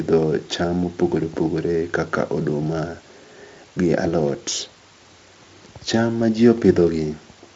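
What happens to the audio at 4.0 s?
Nothing goes wrong at 4.0 s: the speech carries on intact through that moment, with no dropout, click or glitch to be heard.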